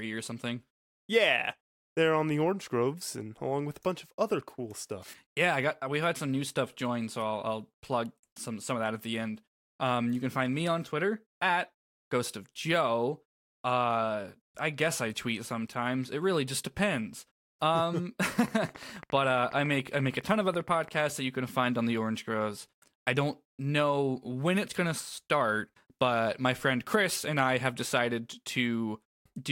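From 18.48 to 20.96 s, before "that you can find", steady ticking at 14.6 per second pokes above the speech: a train of clicks, likely electrical interference.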